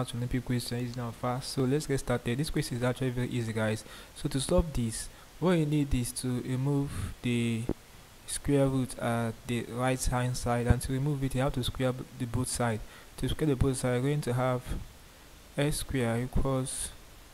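At 4.49 s there's a loud pop, actually a quick double, ending around 4.62 s. Single pops follow at 7.69 to 7.73 s and 10.70 to 10.74 s. Each one jumps roughly 15 dB above the surrounding audio, and the sound carries on under it. That sharp, brief thump is most likely a voltage spike, from a switch, static or a driver glitch, getting into the signal chain.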